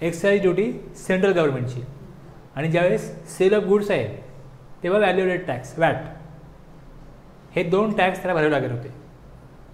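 No technical faults are audible anywhere in the recording.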